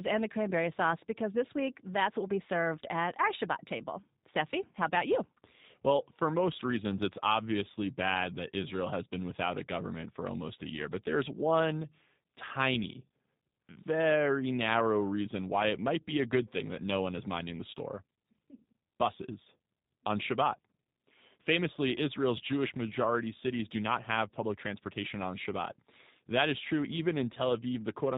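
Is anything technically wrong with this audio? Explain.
Yes, the speech has been through a G.729 codec for its whole length. It sounds like G.729A at 8 kbit/s: nothing above 4 kHz, and a rough, synthetic edge, because each 10 ms frame is rebuilt from a vocal tract model, pitch prediction and a handful of pulses rather than the actual waveform.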